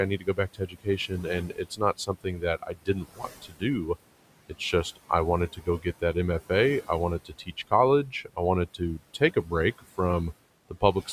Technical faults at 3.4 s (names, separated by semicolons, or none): noise suppressor artifacts; speech cut by the noise suppressor